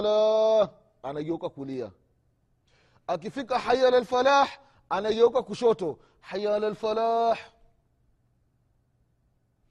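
From 0.89 s to 9.39 s, a click recurs about every 0.85 s, around ten in all, throughout the speech. These are likely clock drift buffer slips: two clocks differing by roughly 200 ppm, so a handful of samples gets dropped or repeated at each slip.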